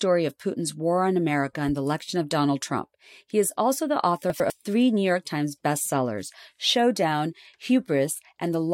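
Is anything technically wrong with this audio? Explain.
Yes. Just after "is also the author", from 4.3 to 4.5 s, the speech has chunks out of order. One 100 ms block was delivered a chunk late, so it plays after the block that should follow it. No audio is lost, but the two segments are swapped. That creates three abrupt joins within about 0.2 s, heard as a brief jumbled stutter in the speech.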